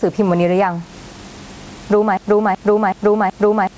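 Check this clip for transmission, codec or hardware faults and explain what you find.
Two faults are audible: gain pumping throughout the speech, and a broken-record loop that takes over the last part of the clip.

Gain pumping runs through the whole clip. The gain swings by around 10 dB, most likely because the gain is set far too high and a fast limiter keeps clamping it. Loud and soft parts end up closer in level, and the sound is squashed.

A broken-record loop starts at 2.17 s and lasts to the end. A 375 ms fragment repeats exactly, back to back, and the speech that should follow is lost. The likely cause is a stalled player, encoder or stream resending its last buffer. Unlike a stutter or dropout, the repeats are identical and evenly spaced.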